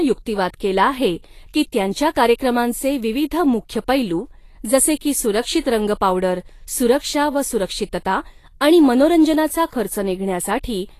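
Across the whole speech clip the treble is hissy and grainy, with nothing above 14.2 kHz and roughened, blurred consonants. This is likely Vorbis compression at a low setting, which fits a bitrate near 35 kbps: the coarsely quantised high band turns into noise.

Pre-echo appears from 2.10 to 2.15 s, after "केला आहे की त्यांच्या" and before "कार्यक्रमांचे विविध मुख्य पैलू", and again from 5.60 to 5.65 s, after "मुख्य पैलू जसे की" and before "रंग पावडर सुरक्षा व". A short hiss of about 45 to 50 ms leads each attack, which sounds softened, because the codec's block spreads noise meant for the loud onset into the quiet moment before it.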